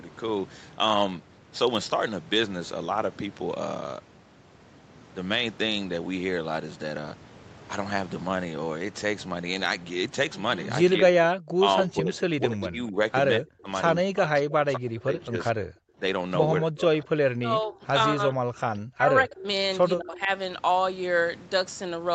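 Speech in this recording keeps sinking and breaking apart in the second half: it dips and cuts out in pieces from 10.97 to 12.98 s, 13.38 to 13.68 s, 13.99 to 15.4 s, 16.61 to 19.47 s and 19.97 to 20.29 s. At its worst it drops by roughly 40 dB, and the later dips are shallower, down to roughly 20 dB. This is likely speech suppressed in double talk. With both ends talking at once, the echo canceller could not tell the near talker apart from the loudspeaker's echo, so it turned everything down. Between those stretches, from 15.68 to 15.98 s, the room sound itself ducks by about 30 dB and then comes back. That is background gated by the echo canceller: while the far end was playing through the loudspeaker, the canceller clamped down on the microphone and released it about 0.3 s later. The whole clip is band-limited to 8 kHz by the call's microphone processing and the Opus codec on the call path.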